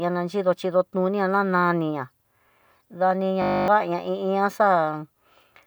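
At 3.42 s the speech locks into a system hang loop lasting until 3.68 s. The machine or its audio driver stalled while the sound hardware kept replaying the same 20 ms stretch of its ring buffer, 13 times over. At a 50 Hz loop rate this short repeat fuses into a steady buzz instead of a stutter, which fits a 20 ms buffer. When playback resumes, roughly a third of a second of speech is simply gone.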